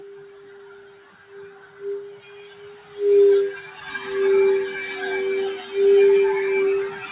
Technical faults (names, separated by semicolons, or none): noise suppressor applied to music or sounds; sound cut by the noise suppressor